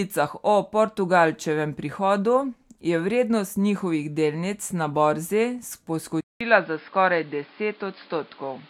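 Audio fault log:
6.21–8.70 s, input switched to a poorer device: after a 200 ms gap the speech loses everything above 5.2 kHz and turns duller, with a new noise floor about 30 dB below the signal and no obvious level jump, likely a changeover to a narrower-band microphone.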